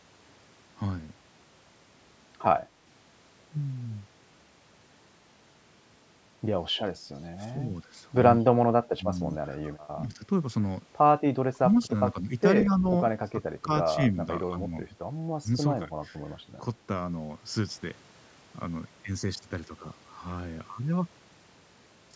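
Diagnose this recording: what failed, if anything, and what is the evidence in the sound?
Speech suppressed in double talk at 7.52–7.69, 8.38–9.04, 9.57–10.22, 11.53–14.73 and 15.42–15.92 s: the speech dips by roughly 10 to 30 dB, likely because call-processing echo cancellation ducked both sides.

Echo leak at 12.59–12.64 s: a brief copy of the speech returns 181 ms late, about 10 dB down, likely loudspeaker pickup that the far-end canceller left behind.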